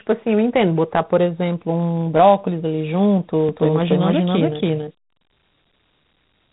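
Throughout, the speech carries Dialogic VOX ADPCM damage: a gritty hiss trailing the voice and nothing above 3.8 kHz, a band that points to 8 kHz telephony sampling rather than mere low-pass filtering. From 3.49 s to the end, a doubled audio track appears. A full-band copy about as loud as the original sits roughly 300 ms behind and switches on abruptly, with no decay or room colour to suggest reverb. The likely cause is a second, slower capture path or two out-of-step copies in an edit.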